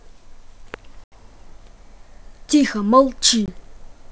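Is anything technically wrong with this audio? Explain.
Yes. There is packet loss on an ADPCM call, at 1.04 to 1.13 s (80 ms of audio, about four packets) and at 3.46 to 3.49 s (20 ms, roughly one packet). Each gap is filled with silence, so the speech drops out with a hard edge. The decoder's predictor and step size drift from the sender's during the gap, so the speech returns slightly distorted, settling within tens of milliseconds. The surrounding wideband G.722 coding sounds clean.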